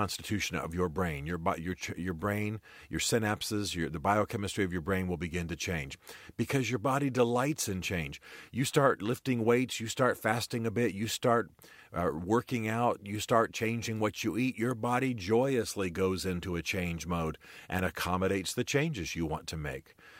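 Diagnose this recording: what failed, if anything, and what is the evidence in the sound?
Nothing in this speech recording points to a failure at any stage, so there's nothing to diagnose here.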